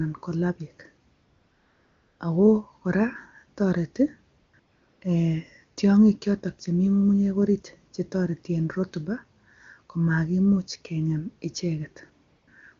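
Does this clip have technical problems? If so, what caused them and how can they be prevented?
Yes. In four pauses, at 1.13–2.19 s, 4.37–4.53 s, 4.59–5.01 s and 12.29–12.47 s, the real background gives way to a smooth, even hiss that switches in and out. This is AMR comfort noise: the handset judged these gaps silent and stopped sending speech frames, so the receiver synthesised noise from a rough level-and-spectrum description. The wideband speech around these gaps sounds clean, which points to a high AMR-WB rate. Disabling discontinuous transmission, or making voice-activity detection less aggressive, would prevent it.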